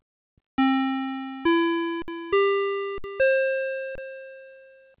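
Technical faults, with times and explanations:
2.02–3.98 s, underrun with held sample: at 2.02–2.08 s and 2.98–3.04 s (60 ms each) and 3.95–3.98 s (about 26 ms), the output buffer emptied and the converter froze on its last value, so the sound drops to a flat hold without a click. Roughly 70, 70 and 30 ms of live audio went missing meanwhile.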